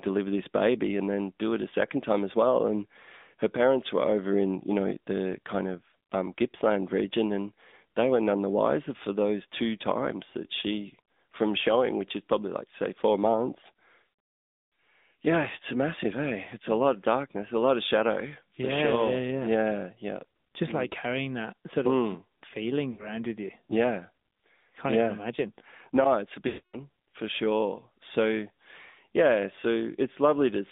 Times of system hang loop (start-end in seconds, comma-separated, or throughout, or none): none